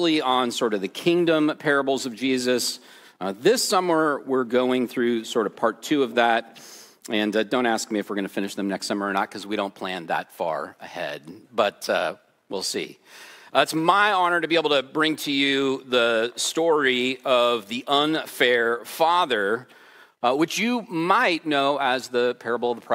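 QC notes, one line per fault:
Nothing to flag here, the audio sounds fine all the way through.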